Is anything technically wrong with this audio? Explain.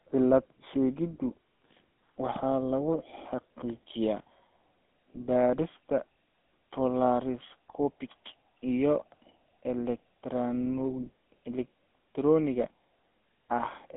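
Yes. Throughout the speech, the GSM full-rate codec is plainly audible. The voice is confined to roughly 200 Hz to 3.5 kHz, and the codec models the vocal tract with a coarse, pulse-driven excitation at about 13 kbps, so voiced sounds take on a buzzy, gravelly roughness.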